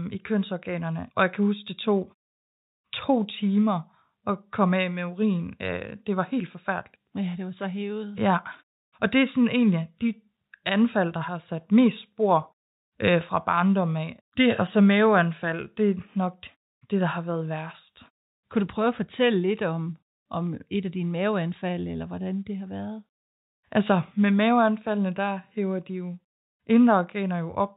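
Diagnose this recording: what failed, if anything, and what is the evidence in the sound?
Nothing failed; no faults are audible anywhere.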